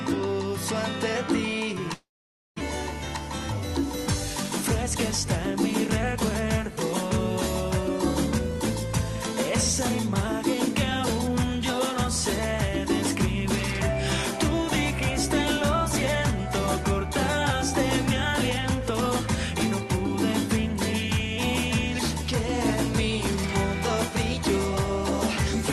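At 1.93 s the audio breaks off and does not return until 2.62 s. The break sounds like a long network dropout, likely caused by packets that never arrived. The receiver fills the gap by carrying the last sound on as a fading buzz or hiss. That fill runs about 670 ms, and roughly 520 ms of it decays to silence. About 600 ms of the original audio is lost for good. When the audio resumes, it arrives a little late, by around 30 ms.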